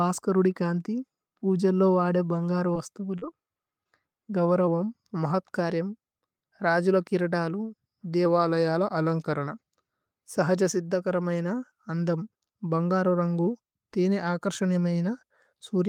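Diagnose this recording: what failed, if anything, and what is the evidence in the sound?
At the network stage, three short concealed packet losses fall at 2.73–2.77 s, 3.19–3.24 s and 3.84–3.87 s, each covering about 20 ms of audio that never arrived. The decoder bridged each hole by extending the preceding sound and then crossfading back. Each event is a brief smear or wobble. On a spectrogram the harmonics run unnaturally flat and smooth across the gap, and in the waveform the periods repeat almost identically before the real signal resumes.

Twice the playback slows by about 5.5% and drops roughly 98 cents, almost a semitone, from 4.68 to 5.33 s and from 8.26 to 9.47 s, then snaps back to normal. Speed and pitch move together, and the stage is most likely a drift correction step in the playback buffer's clock-matching. On a spectrogram every harmonic shifts downward together at a sharp edge and returns just as abruptly. 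The waveform stretches slightly over the same spans.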